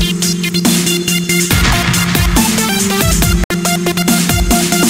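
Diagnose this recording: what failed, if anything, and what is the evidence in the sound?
A digital broadcast dropout cuts the sound to silence from 3.44 to 3.51 s, a hole of about 64 ms, which fits two lost frames. At the reception stage, the decoder muted when frames were missing or corrupt, so the programme material from that gap is lost.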